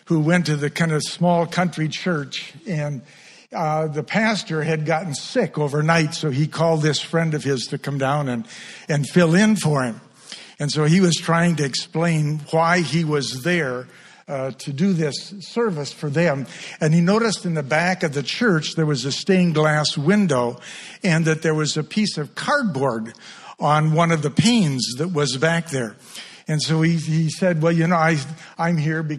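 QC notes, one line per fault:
Nothing stood out on listening to the audio.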